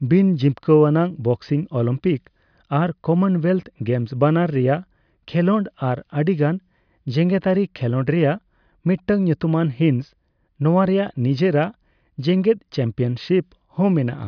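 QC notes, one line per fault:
No faults heard anywhere in this speech.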